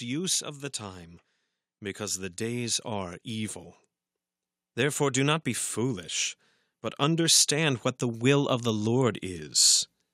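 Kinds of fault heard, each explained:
Automatic gain rising: the gain control judged the input too quiet and raised its level gradually, so the speech and the background noise floor swell together rather than the voice alone getting louder. It happens twice: from 1.97 to 3.63 s the level climbs by about 4 dB, and from 6.96 to 9.5 s, just after "not be foolish but", it climbs by about 5 dB over roughly two and a half seconds.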